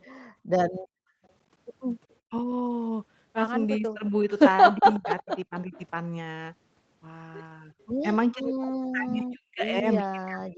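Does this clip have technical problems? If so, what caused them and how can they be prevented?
Yes. There's an echo leak: faint delayed copies of the speech at 0.0–0.04 s, 1.24–1.3 s and 2.1–2.14 s, then a much clearer stretch at 4.79–5.83 s, all trailing by 367 ms. That's likely the far end's loudspeaker output getting past its echo canceller and coming back down the line. Better-tuned echo cancellation or a headset on that side would stop it.

The background is gated by the echo canceller between 0.3 and 1.22 s. The room sound drops away by about 31 dB, adding up to roughly half a second of dips, because the canceller clamped the microphone hard while the loudspeaker played. Gentler suppression settings, or a headset so it has less to fight, would keep the background steady.

Speech is suppressed in double talk at 2.27–2.34 s, across 3.78–5.74 s, and from 8.32 s to the end. The talker dips by around 40 dB in the brief first spot and about 30 dB in the middle stretch, likely because the canceller couldn't separate this voice from the echo and ducked both. 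An echo canceller with proper double-talk handling, or headsets on both ends, would prevent it.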